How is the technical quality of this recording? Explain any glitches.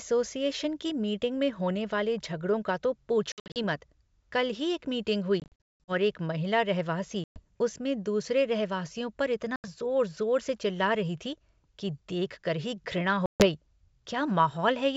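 The speech drops out in five spots, which is packet loss on an ADPCM call, heard over otherwise clean G.722 wideband coding: at 3.32–3.60 s, 5.40–5.94 s, 7.24–7.45 s, 9.56–9.66 s and 13.26–13.44 s. Each gap is a hard-edged silence, and the sound resumes slightly distorted because the decoder's predictor lost step with the sender's.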